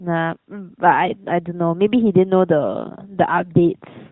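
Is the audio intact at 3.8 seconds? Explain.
Yes, the audio is intact at 3.8 seconds, with the speech passing through the AMR narrowband mobile codec path as it normally would.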